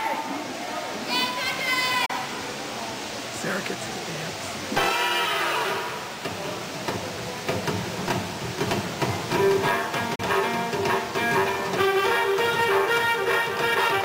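Two digital broadcast dropouts, at 2.06 to 2.10 s and again at 10.15 to 10.20 s. Each time the audio fades out over 8 ms, falls silent, and returns with 32 ms of programme missing, which fits the receiver losing a single frame, either because it failed its checksum or because the signal briefly went. The decoder mutes rather than play corrupt data and resumes at the next good frame. What was sent during each gap is gone.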